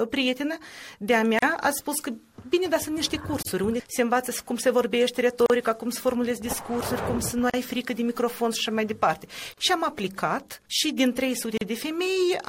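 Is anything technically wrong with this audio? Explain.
Yes. There is a gap at a join of encoded pieces at 1.39, 3.42, 5.46, 7.50, 9.54 and 11.57 s, roughly every 2 s. Each is a gap of about 36 to 38 ms. The audio was evidently encoded in separate pieces and butted together untrimmed, so each encoder's start-up delay and final-frame padding remain as dead air. The silences have smeared edges, and the sound resumes exactly where it stopped. Unlike random network dropouts, the gaps are evenly spaced and nearly identical in length.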